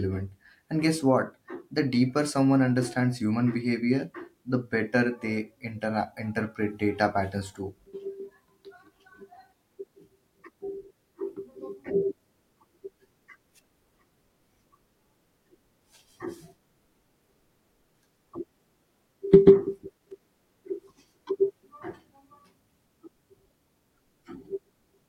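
A speech recording carrying a brief burst of loose connector crackle from 19.98 to 20.40 s, a little under half a second of irregular scratching and crackle. A worn or dirty contact is making and breaking as it shifts, chopping the signal on and off. Unlike regular digital clicks, the spacing is random and rough, and unlike handling thumps it has no low, boomy body.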